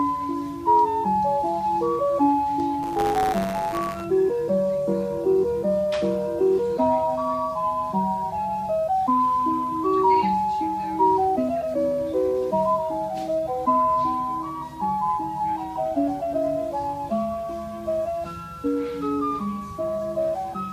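From 2.82 to 4.05 s, a robotic 100 Hz buzz: buffer tearing, where writer and reader slip, splicing stale audio into each period.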